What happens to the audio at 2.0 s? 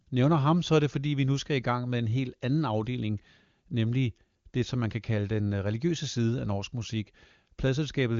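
Nothing goes wrong at 2.0 s: the speech passes intact through the AMR wideband (HD Voice) codec, with its band ending around 7.3 kHz and at most faint damage from the coding.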